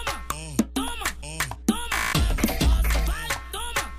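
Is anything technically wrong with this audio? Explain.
Yes. Mains hum runs through the whole clip as a steady 60 Hz tone sitting roughly 15 dB below the programme level. Power-line current is getting into the signal path, most likely through a ground loop or magnetic pickup from a nearby transformer. It is heard as a constant low drone at 60 Hz, with some energy in its low harmonics, that never changes with the audio around it.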